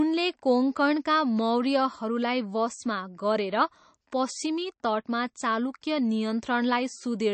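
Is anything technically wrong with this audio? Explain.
Yes. Throughout the speech, the sound is watery and swirly, with nothing above 8.3 kHz and smeared consonant attacks. This is likely MP3 compression at a bitrate near 36 kbps: starved of bits, the encoder cut the treble and let weak frequency lines flicker on and off.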